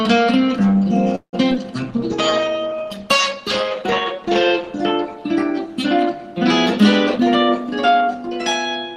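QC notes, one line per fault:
1.15–1.35 s, call audio freeze: packets were likely held up in transit and the jitter buffer ran dry. The receiver stretched the last sound for about 176 ms, fading into roughly 90 ms of silence, then resumed where it stopped. That inserts a gap without losing anything.
1.51–1.53 s and 1.55–1.58 s, short concealed packet loss: about 20 ms of audio failed to reach the decoder in time at each point. At 1.51 s the gap was barely filled and the stream closed up by roughly 20 ms. At 1.55 s about 12 ms of extrapolated sound bridged it, giving brief smears.
1.90–4.78 s, call bitrate drop: the bandwidth estimate fell, and the encoder cut from 32 to 15 kbps. It held the lowest rate for about 2.8 s. Coarser coding makes the audio rougher and less detailed until the rate recovers near 4.78 s.
7.16–8.40 s, jitter buffer speed-up: the buffer held more audio than its target, so the receiver repeatedly cut out pitch-period-sized pieces, roughly 0.15 s in total. 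Playback runs at about 113% speed with pitch unchanged, which sounds noticeably hurried.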